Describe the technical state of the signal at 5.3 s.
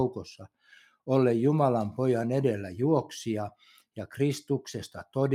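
A speech-tuned noise suppressor runs across the whole clip, including 5.3 s, treating sustained tones and tails as noise; they sink by around 5 dB, so the sound pumps and thins.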